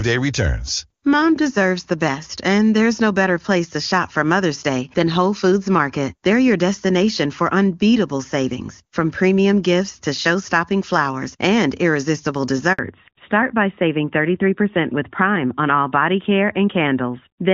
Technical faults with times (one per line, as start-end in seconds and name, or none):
12.73-12.79 handover gap
12.79-17.53 fallback to narrowband